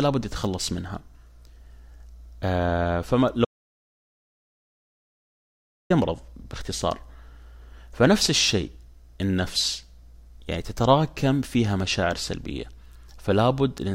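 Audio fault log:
3.45–5.90 s, audio dropout to silence. Speech cuts out mid-flow and resumes 2.45 s later. The gap is silent with no room tone. The input was likely lost upstream while the recorder kept writing silence. That stretch of speech is gone.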